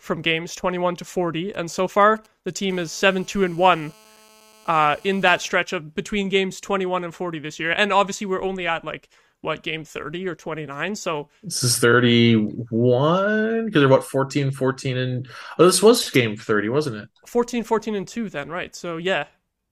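A speech recording picks up interference from a nearby 2G handset twice in quick succession. From 1.54 to 2.65 s there are GSM signalling bursts: short clusters of brief buzzes with a galloping dit-dit-dit rhythm, sitting roughly 30 dB under the speech. This pattern comes from a phone exchanging control traffic with the network, and the audio circuitry rectifies the intermittent radio pulses into audible buzzes. Almost immediately afterward, from 2.69 to 5.44 s, it becomes a continuous GSM phone buzz, ending just before "of between games". Here the handset is in a call and transmitting steadily in its 216.7 Hz burst frame, so the rectified envelope gives a hard, raspy tone at that rate, rich in harmonics and unrelated to the speech, at about 30 dB below the speech level.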